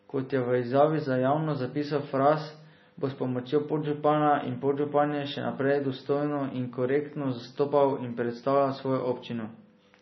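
Throughout, the speech sounds watery and swirly, with nothing above 5.9 kHz. That heavy damage is likely MP3 compression, fitting a bitrate near 24 kbps.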